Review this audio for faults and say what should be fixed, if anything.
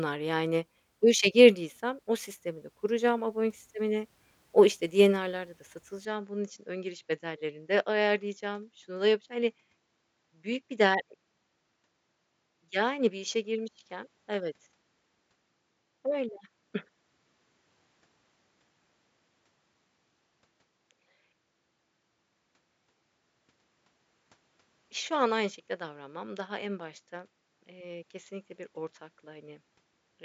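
From 6.05 s to the end, the speech suddenly loses its top end, with nothing above 7.6 kHz, drops about 5 dB in level, and picks up a new noise floor sitting around 50 dB below the speech. There's no gap at the change. It sounds like the input likely switched to a poorer device, a different mic or a headset's narrower path, bringing its own band limit, gain and background. To prevent it, lock the recording input to the intended microphone and disable automatic device switching before you hit record.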